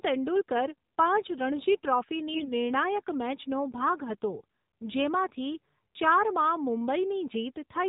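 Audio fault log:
throughout: AMR narrowband mobile codec. Nothing above 4 kHz survives, and the speech sounds buzzy and synthetic. This fits a low AMR-NB mode near 7.4 kbps, where a vocal-tract model driven by sparse pulses in each 5 ms subframe rebuilds the speech with plainly audible damage.
2.34–2.52 s: AMR bit errors. Just before "નિર્ણાયક મેચનો ભાગ હતો", the speech keeps its pitch and level but turns hoarse, scratchy and gargly. Heavily corrupted, weakly protected bits misplace the excitation pulses and skew the finer pitch, gain and spectral values across several frames.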